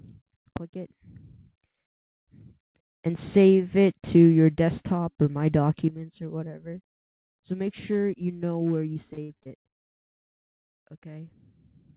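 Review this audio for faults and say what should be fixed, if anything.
From 0.57 s to 0.88 s the level, background included, drops abruptly by about 17 dB, and at 5.88 s it drops again by about 12 dB, staying low to the end. These sudden gain jumps are likely digital gain changes applied between one sample and the next with no ramp. Any gain change should be smoothed over a few milliseconds instead of applied in a single step.

Between 8.93 s and 9.87 s the sound turns choppy and robotic, broken by eight holes, the longest 59 ms. This is repeated packet loss: each missing stretch was patched by extending the preceding sound, with 249 ms filled in, 26% of that span. A deeper jitter buffer or forward error correction on the call path would prevent it.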